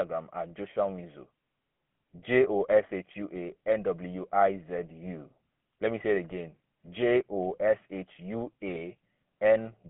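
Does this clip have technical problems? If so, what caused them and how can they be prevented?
Yes. The GSM full-rate codec affects the whole clip: the speech has a buzzy, gravelly roughness from coarse pulse-based excitation, consistent with a 13 kbps full-rate coder. A spectrogram shows energy confined to roughly 150 Hz to 3.4 kHz, with smeared harmonics. Routing calls over a wideband or modern codec would prevent it.

GSM bit errors cause brief squawks and pops at 6.26 to 6.33 s, just after "me say it", and at 8.75 to 8.80 s, consistent with a few corrupted frames of filter, pitch or gain data. The waveform shows sudden level spikes, and the spectrogram shows distorted frame-length blocks. A stronger radio link with better error protection would prevent this.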